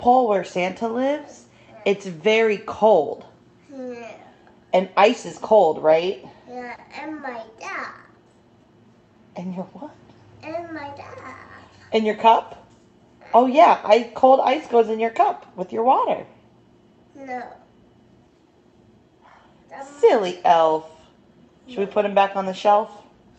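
At 6.75 to 6.80 s, a short stall from a late packet holds the sound for about 30 ms; unlike a dropout, nothing is lost, and playback resumes from the same place.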